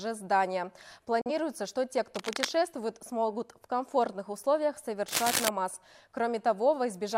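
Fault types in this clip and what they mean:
Digital broadcast dropout: At 1.21 to 1.31 s the sound fades out within about 3 ms and goes silent, then returns. The gap fits a single lost frame. The waveform shows a flat line and the spectrogram a clean vertical blank band across all frequencies.
Cable scratch noise: Dense, uneven scratching sits over the sound at 2.15 to 2.50 s, about 5 dB below it, and at 5.08 to 5.49 s, about as loud. A worn connector or cable being moved is the likely cause. Spectrograms show irregular broadband smears, and waveforms jagged bursts.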